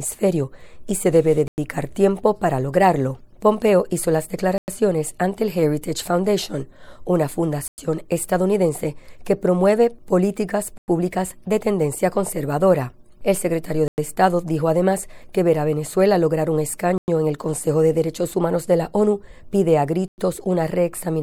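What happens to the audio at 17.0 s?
At a join between chunks of about 3.0 s each, there is a 100 ms gap between chunks from 16.98 to 17.08 s. Nothing is lost, but the sound breaks off into a short hole of silence before resuming.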